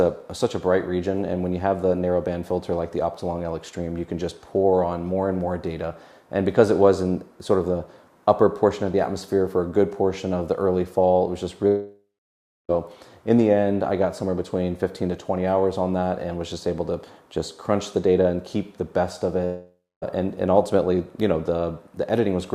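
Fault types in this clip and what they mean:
long network dropout: At 11.67 s and 19.45 s the last sound is drawn out and fades, then goes silent until the audio resumes about 1.0 s and 0.6 s later with that stretch missing, likely because packets stopped arriving and the receiver concealed the gap.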